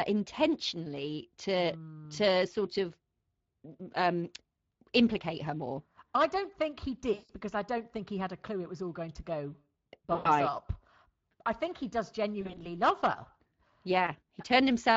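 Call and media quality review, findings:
Speex codec, throughout: hoarse, noisy speech texture fitting roughly 20 kbps CELP, with too few excitation bits. Spectrogram shows smeared harmonic lines with a noise floor between them.

VoIP packet loss concealed by the speech codec at 7.13–7.31 s after "I don't think he", 10.15–10.30 s after "all going to go", and 12.41–12.80 s after "I think he does" (scattered gaps). Decoder extrapolates its last pitch and filter, giving a fading tail that is weak on recovery. Waveform shows a decaying envelope.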